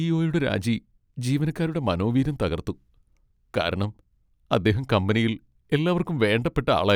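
Speech recording, no technical faults detected.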